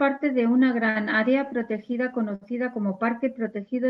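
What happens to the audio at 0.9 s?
A short stall from a late packet runs from 0.89 to 0.97 s. A packet missed its playout time, the jitter buffer ran dry, and the receiver stretched the preceding speech by about 60 ms before resuming where it left off. Nothing is lost, but one sound hangs too long with a faint buzz or dip.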